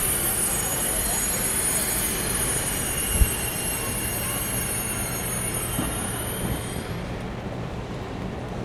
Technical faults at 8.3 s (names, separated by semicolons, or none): none